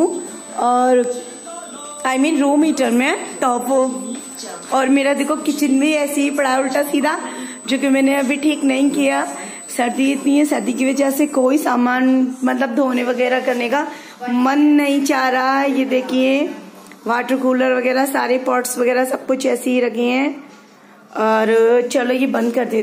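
Current drawn by the USB bus in 125-microsecond microframes is leaking into the audio path through power or ground, producing USB whine from the start of the clip until 11.45 s. The fault sets up a fixed-pitch tone with its fundamental at 8 kHz and its strongest component at the 16 kHz harmonic, sitting somewhere around 15 dB below the wanted sound. It is heard as a thin, piercing whine that holds its pitch and then stops at 11.45 s.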